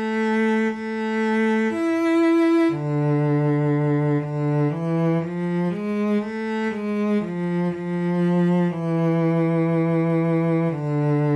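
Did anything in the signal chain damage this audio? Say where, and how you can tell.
No, nothing in the signal chain stood out as damaging this audio when I listened to it.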